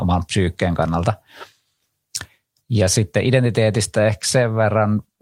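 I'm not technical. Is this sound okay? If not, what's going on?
Yes, it sounds fine.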